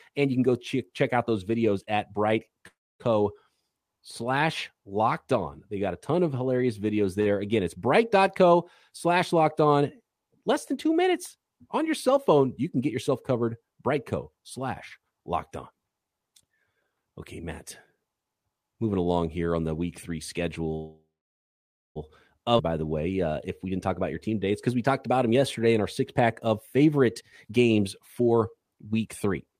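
At 2.67 to 3.02 s a call audio freeze interrupts the speech. The last sound carries on as a fading buzz and then falls to silence for about 0.27 s, adding roughly 0.32 s of filler before speech resumes from where it stopped. The cause is likely packets held up in transit until the jitter buffer ran dry. Nothing is lost; the sentence is just pushed later. A skip would instead jump forward.

At 7.21 to 7.28 s, right after "ton of hilarious videos", a short stall from a late packet stretches the final sound by 48 ms, giving a hold with a slight buzz or dip before the speech continues intact. It differs from a freeze only in scale: too brief to fade or go silent, so it reads as a sound held a touch too long.

From 16.04 to 19.61 s a jitter buffer speed-up runs the speech at about 110 % of normal rate. The receiver trimmed many pitch-period slices, around 0.4 s in total, to drain excess buffered audio. 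Pitch stays put while the pace hurries, which separates it from a simple playback-rate change.

A second call audio freeze follows "the week three" at 20.75 to 21.98 s. The fading continuation gives way to roughly 0.9 s of silence within a 1.2 s inserted gap, likely from a longer packet hold-up, and speech picks up with nothing missing.

At 22.58 to 22.61 s a skip ahead does the opposite, just before "by the way uh". Around 0.7 s of speech is dropped and the two sides are butted together with only a tiny join. The jump forward and the missing material are what set it apart from a freeze.

From 23.38 s to the end, another jitter buffer speed-up runs at about 107 %, removing around half a second so the delivery sounds slightly rushed at unchanged pitch.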